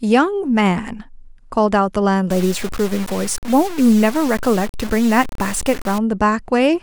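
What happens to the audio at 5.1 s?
At 5.1 s you're in the middle of a stretch of low bit depth without dither running from about 2.31 to 5.98 s. The speech sounds gritty and grainy, with the quietest bits sputtering or dropping out. The error sits only around 15 dB under the signal, likely from truncating to 5 bits with no dither.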